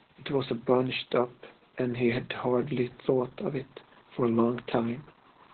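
Opus voice compression runs throughout: heavy SILK coding, likely near 8 kbps, cuts everything above 4.3 kHz, leaving the speech muffled, hoarse and faintly robotic.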